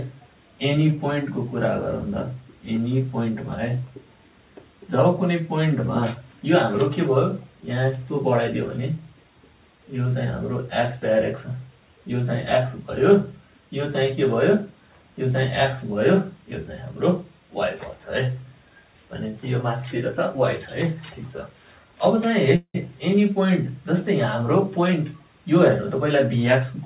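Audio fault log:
22.56 to 22.76 s, call audio freeze: the sound stalls for about 0.2 s, a fading buzzy continuation of the last sound trailing into roughly 80 ms of silence, then resumes exactly where it left off with nothing lost. This is likely a jitter buffer running dry while packets were held up in transit. On a spectrogram the last frame's bands smear horizontally and thin to blank; the waveform shows a decaying tail, then a flat gap.
24.76 to 26.74 s, jitter buffer speed-up: over these two seconds the audio runs about 8% fast at unchanged pitch and sounds hurried. The receiver is shedding excess buffered delay by cutting out many short pitch-period-sized slices, around 150 ms in total. The waveform shows periodic cycles repeatedly joined a few cycles early. The spectrogram keeps harmonics at the same height, with events spaced closer together, all still capped at 4 kHz like the rest of the call audio.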